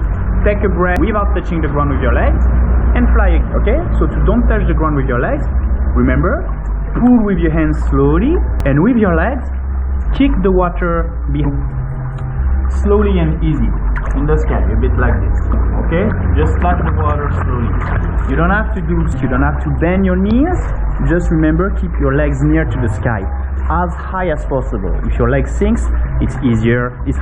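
Damaged data in a compressed stream produces brief chirps or blips at 0.96 s, 3.40 to 3.42 s, 8.60 s, 11.41 to 11.46 s and 19.12 s, each a garbled decoder resync.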